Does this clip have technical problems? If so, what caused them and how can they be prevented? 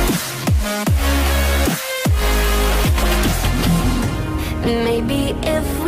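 Yes, there's a corrupt frame decoded at 3.00 to 3.05 s: a short, fairly loud glitch peaking around -5 dBFS, which fits roughly two damaged frames whose flipped bits sent energy to the wrong frequencies. Checksums with error concealment would catch and mask frames like these.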